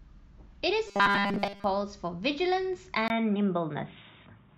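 Speech clip with two faults. From 0.88 to 1.64 s there is robotic sound from repeated short buffers: essentially the whole stretch becomes a rigid metallic buzz locked at 200 Hz, likely from the last 5 ms of audio being looped while new input ran late. Unlike codec warble, the buzz rate stays fixed while the voice is followed only roughly. At 3.08 s, after a 20 ms silence, the input switched to a poorer device, most likely, and stays that way to the end. The band narrows, the level shifts by about 5 dB, and a faint new noise floor appears. Those accompanying changes set it apart from a simple low-pass filter.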